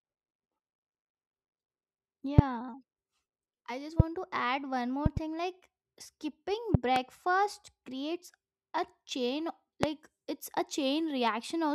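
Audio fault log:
2.39 to 9.86 s, loud pop: seven sharp thumps in five events. The first is at 2.39 to 2.41 s. The second is at 4.00 to 4.02 s, between "I just" and "to add one". The third is at 5.06 to 5.19 s, a double pop after "to add one". The fourth is at 6.74 to 6.99 s, also doubled. The last is at 9.83 to 9.86 s, between "creates a chain" and "it's a". Each peaks about 20 to 25 dB above the speech, which continues underneath. A sudden voltage step, likely from a connector, switch or static discharge, enters the signal and is shaped into a brief pulse.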